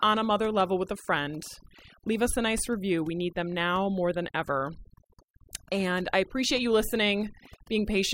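A speech recording that's had overdone noise removal applied across the whole thing, start to finish. The denoiser was pushed too hard, so any frequency band sitting close to its idea of the noise gets pulled right down or switched off, and the softer parts of the voice get caught along with it. You hear it as a lowered background with little twinkly specks popping in and out.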